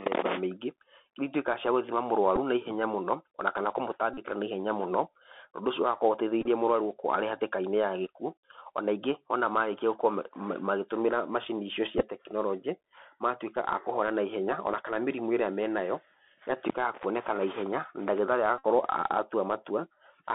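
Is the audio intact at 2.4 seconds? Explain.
No. From 2.36 to 2.38 s a Bluetooth headset packet repeat occurs: two voice packets, about 7.5 ms of sound, were lost, and the headset decoded the previous packet's bits again. The result is a brief rough tick. The waveform shows a short stretch copied twice at a 3.75 ms spacing, and the spectrogram shows a thin vertical seam.

Underneath, the Bluetooth CVSD headset codec is plainly audible. Its one-bit up-or-down coding at 64 kbps, with an adaptive step, leaves only about 250 Hz to 3.6 kHz. The spectrogram is empty above that band, with a granular haze under the speech, and the waveform's steep rises look stair-stepped where the step size lags.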